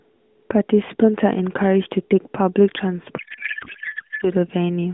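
Up to about 3.18 s you get narrowband AMR mobile-codec speech, light codec colouring and nothing much above 3.6 kHz. Then from 3.18 to 4.26 s there's a codec payload misread: the decoder is pulling bits from the wrong positions in each frame, which sounds like octet-aligned AMR being parsed as bandwidth-efficient. The speech vanishes into garbled, warbling noise that barely tracks it, and it holds until the packing lines up again.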